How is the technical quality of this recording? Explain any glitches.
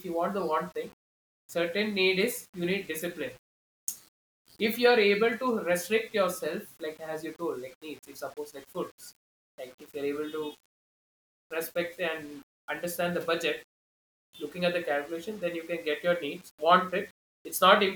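The recording has one fault that runs throughout: low bit depth without dither. Across the whole speech, quiet passages sound gritty and grainy, with noise roughly 30 dB below the signal that follows the voice. This is likely coarse rounding to about 8 bits with no dither, so the error tracks the signal.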